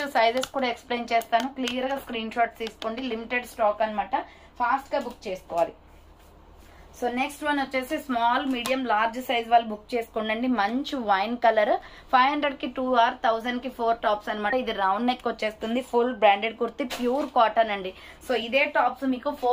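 The audio has two kinds of compression fault. At 9.25 to 9.28 s there is a corrupt frame decoded. Damaged bits in roughly two compressed frames were played as if valid. The misread values put energy at the wrong frequencies for the length of those frames. The result is a short burst of misplaced energy peaking at about -30 dBFS. Compressed frames skipped occur twice, at 12.43 s and at 14.49 to 14.53 s. In each case whole frames were never played, so the audio jumps ahead. The first jump loses about 20 ms and the second about 70 ms. The gaps are heard as small forward lurches in the sound.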